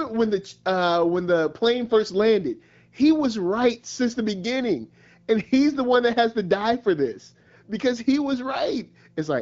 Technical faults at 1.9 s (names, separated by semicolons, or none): none